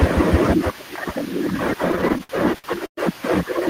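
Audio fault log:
1.91–2.99 s, repeated stalls (stutter): ten late-packet gaps, longest 114 ms, were filled by stretching prior sound, so speech drags and stutters without loss.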